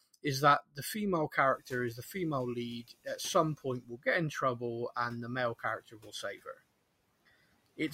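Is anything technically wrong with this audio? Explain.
Yes. Speech cut by the noise suppressor occurs at 0.61–0.95 s, 3.57–4.06 s and 5.8–6.57 s. The suppressor treated parts of the speech as noise and lowered them by about 19, 14 and 15 dB, so soft consonants and word endings sound swallowed and faint. The room noise that rises by about 24 dB near 1.5 s, staying about 23 dB under the speech, belongs to the recording itself.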